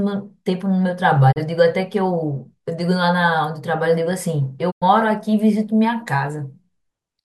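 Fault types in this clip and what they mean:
Digital broadcast dropout: the receiver lost decodable frames and muted, so the speech fades out over 20 ms into silence at 1.31 s and again at 4.70 s. The missing stretches, 32 ms and 96 ms, fit one and three dropped frames.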